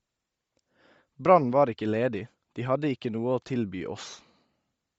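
Speech that sounds heavily coded the whole way through: the top end has turned breathy and grainy, with a hiss-like fill where real detail should be, which points to a low bitrate around 32 kbps and 10 ms frames, most likely Bluetooth LC3 compression. Above that, the sound stops at 8 kHz, just as the call microphone processing leaves it.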